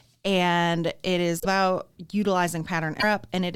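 At 1.40 to 1.46 s and again at 2.99 to 3.04 s the speech jumps ahead, with a short disturbance of roughly 60 and 40 ms, each spanning about two 26.1 ms frames. The likely cause is a broken MP3 bit reservoir: after frames went missing, the following frame reached back for borrowed data and decoded another frame's bytes instead. On a spectrogram each spot is a narrow vertical band that breaks the speech pattern, and the waveform shows an abrupt discontinuity.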